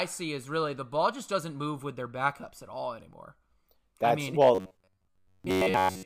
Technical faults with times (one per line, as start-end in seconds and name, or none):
4.55-6.05 robotic sound from repeated short buffers